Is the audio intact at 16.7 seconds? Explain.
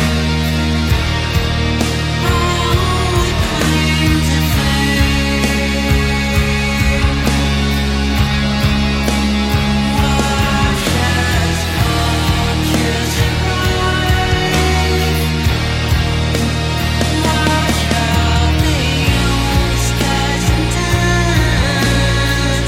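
Yes, the audio is intact at 16.7 seconds, with no dropout, glitch or other fault to be heard at that moment.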